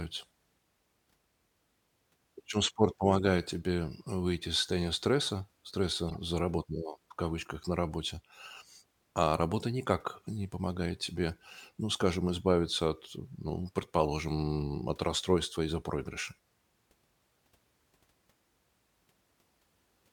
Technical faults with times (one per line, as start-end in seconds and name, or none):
6.09-6.21 corrupt frame decoded